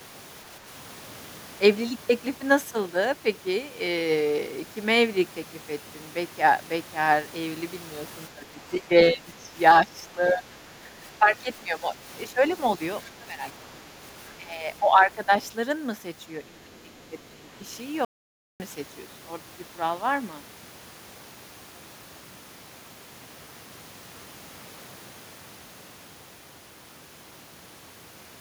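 Speech suppressed in double talk appears from 8.29 to 12.43 s, 12.78 to 14.03 s, 14.37 to 15.31 s and 16.41 to 17.66 s. The likely cause is an echo canceller that, with both sides talking, turned down the local voice along with the echo. The speech sinks by about 10 dB, deepening to about 15 dB and then about 20 dB in the last stretch.

The other side's voice leaking through shows up as faint scraps at 15.44 to 15.50 s and 16.74 to 16.97 s, about 35 dB below the speech. This is likely loudspeaker sound the canceller failed to remove from the microphone.

An audio dropout to silence runs from 18.05 to 18.60 s, a gap of about 0.55 s of total silence with no room tone. The input was likely lost briefly while silence kept being written, and the sound in that gap is gone.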